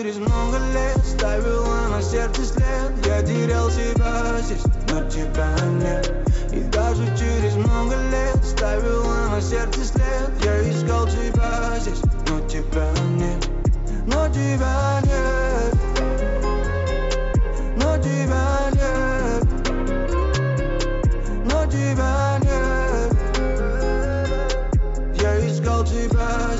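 No technical faults can be heard anywhere in the audio.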